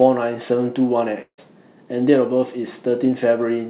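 At 1.22 s the speech breaks off for about 0.18 s, until 1.40 s, which is most likely a long network dropout: packets stopped arriving and roughly 160 ms of audio never played. The receiver first stretches the last sound into a fading buzz, then about 80 ms of near-silence follows. On a spectrogram, the smeared, decaying band, capped like the rest of the call near 4 kHz as G.711 would suggest, gives way to an empty gap. The waveform shows a shrinking envelope, then flatline.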